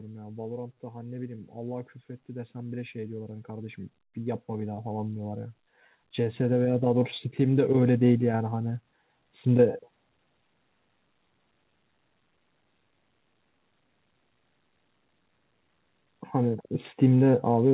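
Speech with automatic gain rising twice. From 0.8 to 5.48 s, voice and background swell together by about 9 dB. From 6.16 to 8.67 s, they swell again by about 6 dB. The call's gain control judged the input too quiet and raised it gradually. Nothing is heard above 4 kHz, which fits a G.711 A-law call codec.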